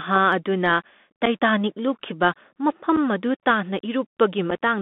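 A speech clip carried throughout by a Bluetooth CVSD headset codec, the narrowband link that encodes each sample as a single up-or-down bit with an adapting step. The line passes roughly 200 Hz to 3.6 kHz, which fits a 64 kbps CVSD stream. Codec damage is plainly audible: scratchy sibilants, slope-overload distortion on loud bright sounds, and a granular hiss beneath the speech. A spectrogram shows a hard ceiling near 3.6 kHz, with empty space above it and a grainy noise floor across the band. Unconcealed Bluetooth headset packet loss punches three brief holes into the sound, at 1.26–1.28 s, at 2.96 s and at 4.50 s. Each hole is about 7.5 ms of audio, likely one lost packet between headset and phone, filled with silence or an idle pattern instead of being masked. These gaps have abrupt edges that can click, and the sound returns momentarily quieter. On a waveform they appear as sudden flat notches, and on a spectrogram as thin vertical slits.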